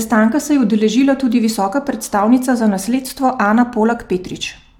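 No technical faults can be heard anywhere in this speech recording. Nothing in it breaks, drops out or distorts at any point.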